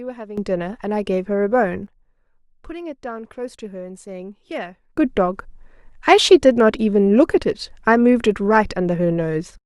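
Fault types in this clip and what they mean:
Sudden gain jump: gain likely switched within one sample without a ramp, lifting speech and background together by about 12 dB, then later by about 17 dB.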